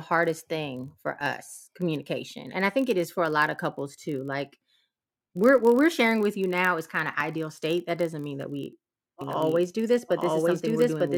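Throughout the speech runs a buzz at 43.1 Hz, the signature of a block size mismatch (padded). Each block read, which fits a 1024-sample size, ends in a stretch of zeros, slowing the audio to 0.999 of its speed at unchanged pitch. A spectrogram shows evenly spaced vertical gaps; the waveform drops to near silence once per block.

At 1.21 s and again at 7.21 s, six seconds apart, a tiny skip comes from overlap between stream segments. The 6 ms and 14 ms overlaps are cut from audio that was never duplicated, so the waveform jumps discontinuously, drawing a thin full-height vertical line on a spectrogram.

From 9.21 s to the end a doubled audio track appears. A second full-band copy at about the same level trails by around a second, likely captured again through a slower path. It cuts in abruptly, and the spectrogram shows each pattern repeated a second later without any reverberant smear.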